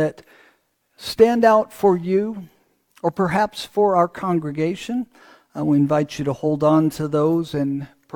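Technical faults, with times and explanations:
Nothing in this one stands out as a technical problem; it all sounds just as it should.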